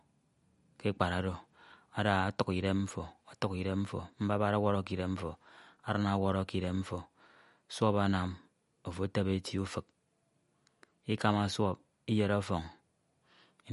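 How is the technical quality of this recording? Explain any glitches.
The technical quality is limited by one fault that runs through the whole recording: the speech has plainly audible lossy-coding damage. From start to finish there is no content above 11.2 kHz, so the top octave is missing and sibilants sound dull and clipped. Weak detail flickers in and out, giving a watery, swirly texture with metallic chirps on s sounds, and consonant attacks are smeared. The likely cause is MP3 compression at a low bitrate, with the damage level fitting something around 48 kbps. Short of bits, the encoder drops the treble at a fixed cut-off and zeroes the quieter frequency lines, and those lines switch on and off from one frame to the next.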